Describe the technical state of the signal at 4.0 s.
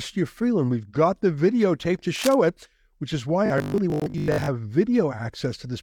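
Right at 4.0 s you're in the middle of robotic sound from repeated short buffers, running from 3.46 to 4.48 s, just after "it which is why". The speech collapses into a stiff, metallic buzz at 50 Hz that still loosely tracks the words. The likely cause is audio arriving too slowly, so the player keeps looping the last little chunk, and 50 Hz points to a 20 ms buffer. Roughly half the audio there is repeats rather than real signal.

Sitting inside that, from 4.00 to 4.02 s, there's a gap between stream segments: a hard-edged hole of silence, about 20 ms. It lands where two segments meet, and a 4 s segment boundary fits that spot. Their timestamps don't quite line up, so the player pads the space with nothing. You hear a sharp dropout in the buzz, though no actual audio goes missing.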